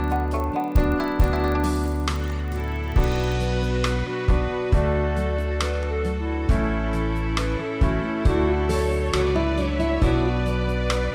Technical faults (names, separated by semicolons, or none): filter restarted on every block